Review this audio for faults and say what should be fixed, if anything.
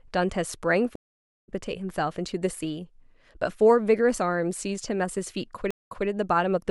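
Two stream reconnects occur. From 0.96 to 1.49 s, speech drops out for 467 ms and resumes about half a second later. From 5.71 to 6.07 s, a 184 ms gap is followed by a 183 ms repeat. Each time the connection broke and a fresh decoder restarted mid-stream. Larger client buffering with seamless resume-from-position logic would prevent both.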